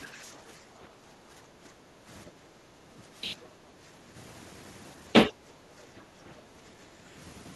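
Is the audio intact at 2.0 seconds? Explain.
No. At 2.0 seconds the background is gated by the echo canceller. From 0.6 to 2.07 s, the canceller pulls the microphone down while the loudspeaker plays. The room sound dips by about 8 dB for roughly a second and a half, then returns.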